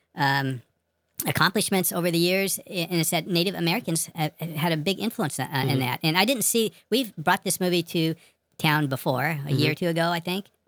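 From start to finish the speech runs fast and high, the signature of a wrong sample rate: the samples are clocked out faster than they were captured, with no resampling in between. Tempo rises by a factor of 1.38 and pitch by about 5.55 semitones, both locked to the same ratio, which fits material recorded at 32 kHz being played back at 44.1 kHz. Voices come across hurried and thin, with formants shifted upward.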